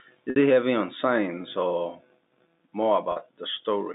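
A brief held, buzzy tone fills 0.30 to 0.36 s, just before "it heavy on science", and again from 3.12 to 3.16 s. This is packet loss with pitch repetition: the receiver looped the last pitch period to bridge each 60 ms and 40 ms gap.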